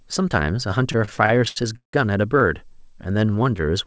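From 0.92 to 1.95 s the speech stutters with repeated stalls: packets arrived late, the jitter buffer ran dry eleven times, and the receiver stretched the last sound to fill about 390 ms, the longest gap 172 ms. On a spectrogram, smeared, repeated frames break the harmonics; the waveform shows fading plateaus.

From 2.69 to 3.85 s a jitter buffer slow-down adds about 116 ms, so speech plays at 91% speed with unchanged pitch while the buffer rebuilds. Spectrograms show elongated, evenly repeated pitch periods, still cut off at 8 kHz by the G.722 path; waveforms show stretched, near-identical cycles.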